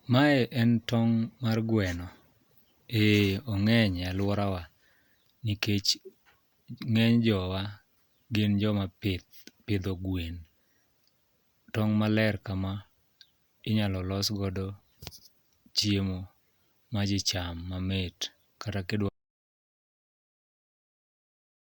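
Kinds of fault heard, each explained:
Audio dropout to silence: The speech cuts off abruptly at 19.09 s and never comes back. The final 2.5 s are silent, with no room tone underneath. The input was likely lost while recording carried on writing silence. Whatever followed is gone.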